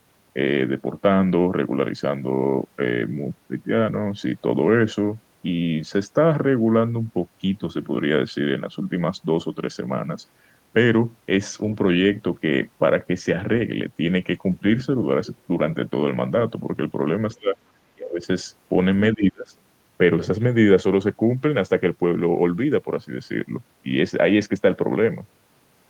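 Speech with three brief dropouts at 17.4–17.58 s, 17.95–18.26 s and 19.13–19.51 s, each sinking by roughly 25 to 30 dB. The waveform envelope dips, and a spectrogram shows short gaps. This is likely speech suppressed in double talk, the echo canceller ducking the talker.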